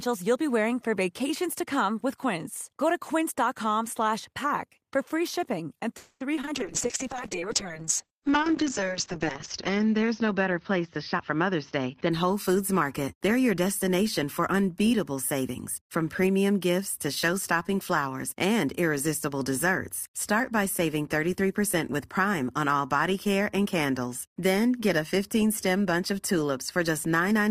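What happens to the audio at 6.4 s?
Short concealed packet loss hits three times, at 6.36 to 6.39 s, 6.41 to 6.45 s and 6.45 to 6.49 s. The receiver patches each gap by extending the previous sound, leaving a brief smear or wobble.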